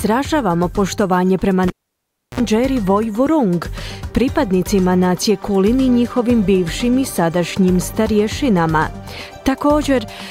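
At 1.68 s a live cable is pulled out and plugged back in. A pop cuts the sound to near silence for about 0.68 s. Then a 55 ms burst of 60 Hz mains buzz arrives as only the tip touches. A second pop marks the return at 2.40 s.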